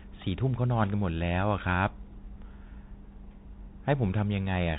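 The Bluetooth CVSD headset codec colours the speech from start to finish. The band stops near 4 kHz, so everything above is gone and the sound is thin. CVSD sends a single up-or-down bit per sample and adapts its step size. That fits a 64 kbps link. Fast, loud high content outruns the step and smears into distortion. S sounds turn rough and scratchy. A fine granular hiss sits under the speech throughout.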